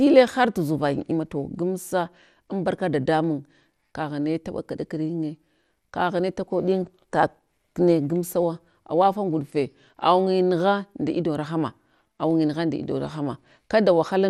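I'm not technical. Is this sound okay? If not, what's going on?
No. The speech sounds dull and muffled for the whole clip, as if the top end has been shaved off. There is also a gurgling, grainy roughness clinging to it. The likely cause is MP2 compression squeezed too hard. This older format splits sound into many slices by pitch. When it runs short of space, it drops the highest slices and stores the rest crudely. That causes the dullness and the watery, bubbling texture.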